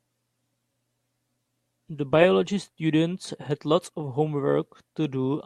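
From 0.18 s to 5.46 s, faint clock slip clicks tick about ten times a second. A likely clock mismatch drops or repeats one sample each time.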